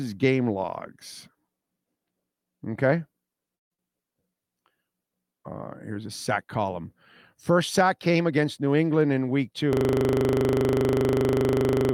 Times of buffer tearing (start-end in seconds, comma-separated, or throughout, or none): none